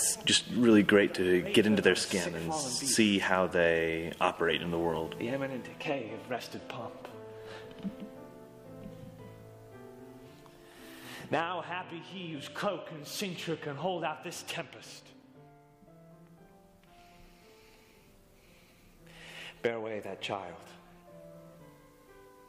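At 18.76 s a single corrupt frame is decoded: a very brief, quiet blip or chirp where damaged bits in one compressed frame were played back as if valid, so misread codes and gains put energy at the wrong frequencies for just that frame. The error peaks only at about -50 dBFS. On a spectrogram it shows as an isolated vertical smear of unrelated energy a frame wide. On the waveform it is barely visible as a tiny irregular burst.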